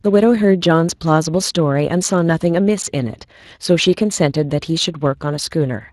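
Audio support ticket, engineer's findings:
Speex codec damage across the whole clip, start to end. Speech sounds grainy and hoarse. Damage plainly audible. Likely component: the VoIP or chat encoder. Mechanism: CELP coding with too few bits for the excitation signal, so the waveform detail between pitch pulses is replaced by a coarse approximation. The texture fits a setting of around 22 kbps.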